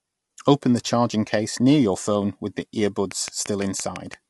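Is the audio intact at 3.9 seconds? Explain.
No. At 3.9 s the speech sits inside a train of clicks running from 3.12 to 4.15 s, starting just after "your phone with the". About seven near-identical pulses arrive at a steady 5.9 per second, peaking roughly 15 dB above the speech and ticking through pauses as well. That regular spacing and matched shape set them apart from random crackle, and point to a likely cause in interference from nearby equipment or a faulty connection.

Under the clicks, the whole clip carries low-delay AAC compression damage. The voice sounds rough and grainy, with noise filling the gaps between harmonics and nothing above 11.6 kHz. Short frames resolve pitch poorly, and this fits AAC-ELD at about 32 kbps, likely a video-call path. Ordinary AAC keeps pitch cleaner.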